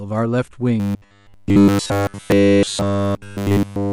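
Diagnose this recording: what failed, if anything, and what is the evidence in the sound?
From 0.8 s to the end, the speech collapses into a rigid, metallic buzz at 100 Hz that only loosely tracks the words: robotic sound from repeated short buffers. The likely cause is at the driver or buffer stage, with essentially every 10 ms block replayed while fresh audio went missing.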